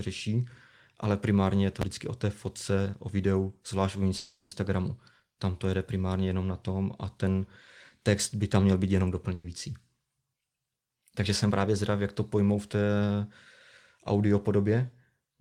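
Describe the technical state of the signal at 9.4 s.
Right after "tam měl být jenom", a burst of packet loss runs 9.34 to 9.46 s: the receiver stretches and fades the last sound, then resumes with about 100 ms missing.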